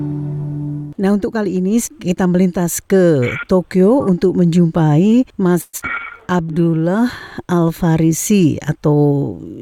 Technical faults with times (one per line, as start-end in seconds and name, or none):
5.61-5.81 long network dropout
6.00-6.66 jitter buffer slow-down